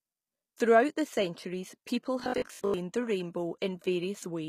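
Throughout the speech, codec damage is plainly audible and nothing is present above 14.9 kHz. The likely cause is HE-AAC compression, which fits a bitrate near 20 kbps: only the lower spectrum is coded and the treble is rebuilt by copying lower bands upward, so upper harmonics do not line up with the real ones.

From 2.20 to 2.80 s the sound turns into a rigid, metallic buzz at 50 Hz, likely robotic sound from repeated short buffers. Audio is arriving too seldom, so the last 20 ms is replayed over and over while fresh material is skipped. Most of that stretch is repeats.

Inside that passage, from 2.60 to 2.64 s, pre-echo appears as a hiss lasting about 38 ms before a sharp attack. The codec spread quantisation noise sized for the loud onset across its whole block, filling the quiet moment ahead of it and smearing the attack.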